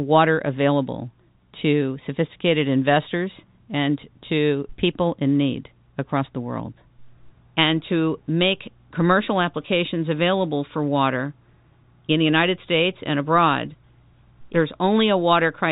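Nothing goes wrong anywhere in the recording; the speech simply carries the narrow, telephone-band character of G.711 mu-law coding, with nothing above 4 kHz getting through.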